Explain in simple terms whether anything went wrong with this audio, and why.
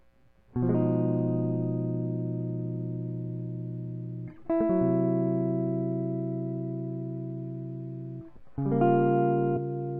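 Near the end of this music clip, from 9.56 to 9.58 seconds, there is damaged data in a compressed stream. A small piece of the compressed file was corrupted, so the decoder could not read the audio at that point. It lost its place and had to search for the next readable chunk before playing normally again. The result is a very brief chirp or blip that breaks into the music.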